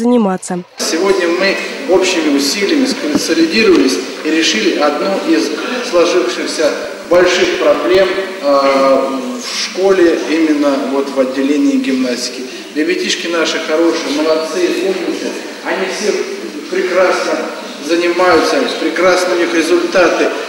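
Periodic USB or driver dropouts from 6.55 to 8.35 s: every 0.1 s, under a millisecond drops to silence, giving a steady train of ticks.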